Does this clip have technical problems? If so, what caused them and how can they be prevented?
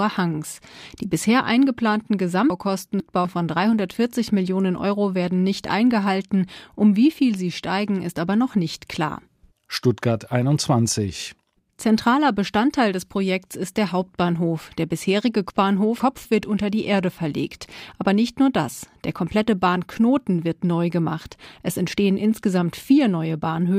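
Yes. Chunks out of order: a 250 ms chunk was delivered two slots late, so 2.5–3.25 s and 15.5–16.25 s play jumbled, with three hard joins in each. Reordering chunks by sequence number before playback would prevent it.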